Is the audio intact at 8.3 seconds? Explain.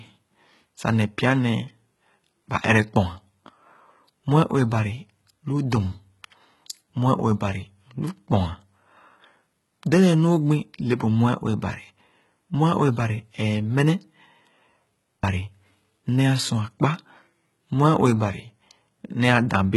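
No. At 8.3 seconds the speech carries the same HE-AAC compression damage heard across the whole clip, and it is likely from a low-bitrate HE-AAC encode, consistent with around 16 kbps. The damage is heavy. Only the lower spectrum is coded directly, and the treble is rebuilt by copying lower bands upward under a coarse envelope, so the harmonics above the crossover do not align. Sibilants sound gritty and metallic, and nothing is present above 11.8 kHz.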